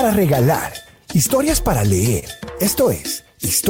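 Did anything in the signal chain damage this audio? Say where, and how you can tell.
Yes: repeated stalls (stutter) from 1.87 to 2.88 s, six brief network holds, longest 28 ms. The jitter buffer kept emptying and stretched the last sound while losing nothing.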